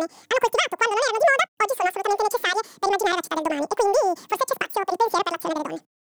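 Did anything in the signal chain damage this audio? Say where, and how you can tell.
Yes. The damage sits at the sample-format or reading stage, where the stream is interpreted. This is audio read two samples at a time (double speed), and it runs from start to finish. The speech plays at twice its proper rate and sits a full octave, 12 semitones, above where it should be. The reader treats each pair of samples as one frame, as though the data were stereo or twice as wide.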